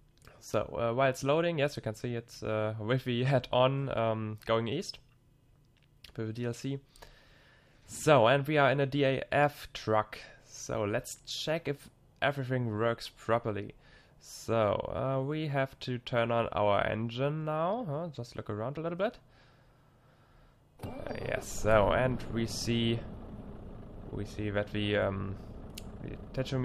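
No technical faults detected.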